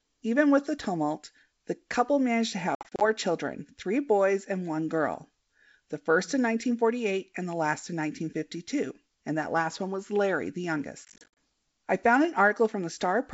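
Packet loss on an ADPCM call at 2.75–3.08 s and 11.05–11.28 s: brief silent holes, scattered over roughly 260 ms and 320 ms, leave the decoder's predictor and step size out of step, so the speech returns with some distortion.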